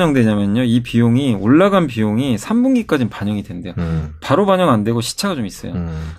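No technical faults can be heard anywhere in the speech recording.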